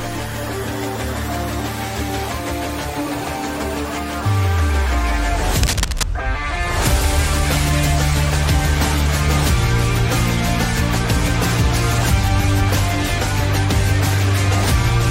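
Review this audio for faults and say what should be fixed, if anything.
Cable scratch noise runs from 5.63 to 6.03 s, a burst of rough scratching and rustling lasting about 0.4 s and sitting only a few dB below the main sound. The likely cause is a worn cable, connector or control being moved, so that its contact resistance jumps about and injects noise. On a spectrogram it shows as a dense, broadband smear of uneven vertical streaks; the waveform shows jagged, irregular spikes riding on the signal. Replacing or cleaning worn cables and connectors, and keeping them still during recording, would prevent it.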